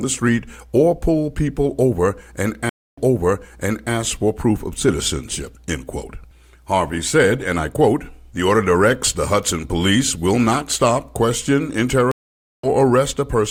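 At 2.69 s a stream reconnect breaks the audio. After 0.28 s of silence, a fresh decoder restarts it 0.96 s earlier, repeating material. At 12.11 s a second reconnect leaves 0.52 s of silence, then resumes roughly 0.4 s later, skipping ahead.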